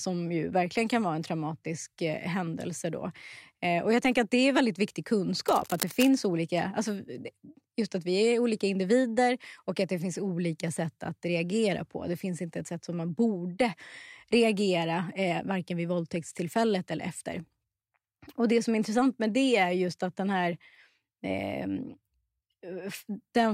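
From 5.48 to 6.09 s, a burst of cable scratch noise sits over the speech. It lasts about 0.6 s. The sound is a rough, uneven crackle and rustle, dense rather than a single click. It runs roughly 10 dB below the speech. The likely cause is a worn cable, connector or control being moved. Its contact resistance shifted rapidly, and those shifts reached the signal as noise.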